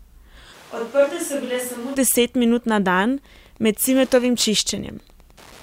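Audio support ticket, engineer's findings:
0.55–1.94 s: sound goes roomy and hollow, thinner low end, drops about 10 dB, room noise comes up to roughly 25 dB under the speech. Snaps back just before "deset minut na". Likely a switch to a distant microphone, close mic dropped out.

3.2 s to end (5.62 s): steady ticking about ten times a second, faint, around 30 dB under the signal. Wi-Fi interference. Nearby radio's beacon every 102.4 ms getting rectified in the audio circuit. Check routing and shielding near the transmitter.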